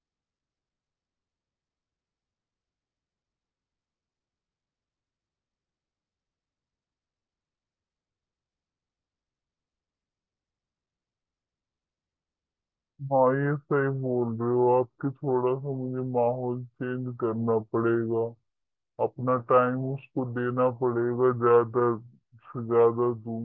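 Wrong sample rate throughout: the samples appear to be played back without conversion at two-thirds of the rate they were captured at, which fits 24 kHz audio being clocked out at 16 kHz. Because nothing resamples the data, duration and pitch shift together by the same ratio. The speech runs at 0.667 times its natural speed and drops about 7 semitones, so every voice sounds deep, slow and drawn out for the whole clip.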